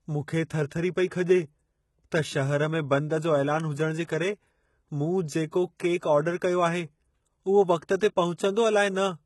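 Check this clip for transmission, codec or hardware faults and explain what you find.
Two codec faults are audible: heavy low-bitrate compression throughout, and two pre-echo events.

Throughout the speech, the damage points to HE-AAC compression as the likely cause, at a bitrate that fits roughly 16 kbps. The codec transmits only the lower spectrum and synthesises the treble by copying lower bands upward under a coarse envelope. Nothing is present above 11.8 kHz, and the rebuilt upper band does not match the real harmonics, so sibilants come across gritty and metallic, with a lisping edge.

Pre-echo appears from 1.08 to 1.11 s, spreading over 35 ms, and again at 8.00 s, spreading over 15 ms. A sharp onset landed late in a transform block, and the quantisation noise sized for that loud attack was distributed across the whole block, including the quiet stretch before it. Each attack is preceded by a brief hiss and sounds softened and smeared.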